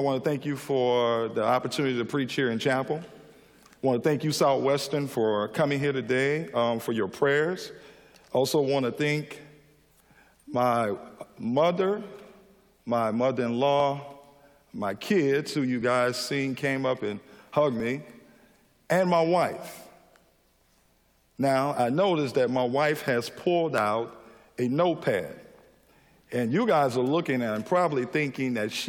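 At 5.84, 11.81, 13.80, 15.82, 17.80 and 23.78 s there is a brief click or tiny skip. Each is an overlap between stream segments. Two adjacent segments claim the same stretch of time, and the player trims the overlap away. That discards sound that was never actually duplicated, so roughly 11 to 18 ms is lost and the waveform jumps. The events fall on multiples of about 2 s, matching 2-second segment boundaries.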